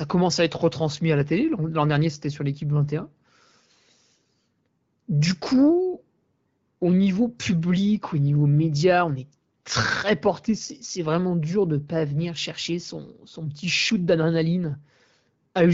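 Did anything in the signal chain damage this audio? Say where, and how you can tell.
No, nothing in the chain has done any harm here; the speech comes over the AMR wideband (HD Voice) codec at 12.65 kbit/s, and that stage is simply doing its normal job at that rate.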